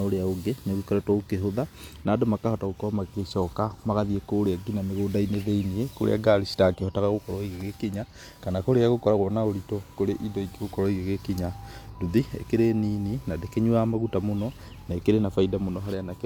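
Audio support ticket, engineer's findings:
No fault found on listening; speech path shows no audible defect, no action required.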